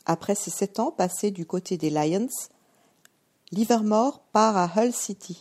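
From 3.80 s to the end, the speech turns slightly dull: that's channel delay (comb filtering). One channel runs roughly a sample late, about 0.02 ms, and summed to mono it puts the first notch up near 20 kHz, so the very top gets shaved.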